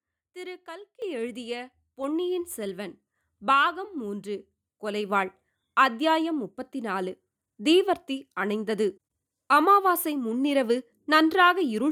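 At 1.02 s the microphone volume steps up by about 9 dB, as the call software decides the mic's too quiet; speech and background jump louder together.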